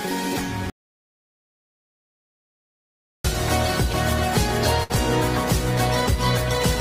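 The input signal was most likely lost between 0.70 and 3.24 s while the recording carried on writing silence. The result is an audio dropout to silence: the sound stops abruptly in mid-flow and returns just as suddenly after about 2.5 s of dead silence. No room tone or background hiss fills the gap, and whatever happened in that stretch is simply absent.

At 4.83 s a burst of packet loss strikes, with roughly 60 ms of stream data arriving too late or not at all. The receiver covers the hole by extending the last sound it had and fading it down over about 61 ms. That concealment can be heard as a brief smeared, held tail, which then gives way at 4.91 s to audio that resumes further on, skipping a short piece of the original.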